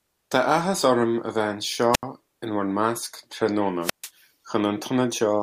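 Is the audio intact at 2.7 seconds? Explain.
Yes, at 2.7 seconds the speech runs through cleanly with no dropout, click, distortion or other technical fault audible at that moment.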